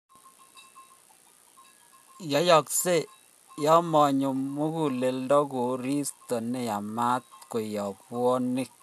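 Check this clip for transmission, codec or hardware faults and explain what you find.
I find no faults to explain in this clip.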